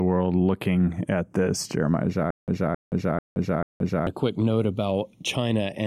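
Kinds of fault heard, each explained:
Channels drifting apart: The two channels were captured against clocks that disagree by something like 50 parts per million, so their offset creeps from nothing to just under half a millisecond over the clip. Summed to mono, the resulting comb notches glide gradually through the spectrum of the speech, giving a slow, seasick flanging. A fixed channel offset would instead leave the colouration static, while a flanger effect would sweep back and forth periodically rather than in a single one-way drift.
Stutter with silent gaps: From 2.31 s to 4.07 s, just before "a quick note", the same 267 ms fragment plays four times, each followed by 174 ms of dead digital silence, so the burst returns every 441 ms at a strict pace. This is likely a stalled player or stream replaying its last buffer on each retry, and the speech that belonged in that span is lost. 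Plain dropouts would leave gaps without the repeated fragment.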